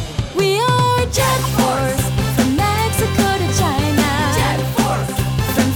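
A corrupt frame decoded at 1.43 to 1.49 s: a couple of damaged compressed frames played anyway, misplacing spectral energy into a brief chirp, blip or burst of noise peaking around -10 dBFS.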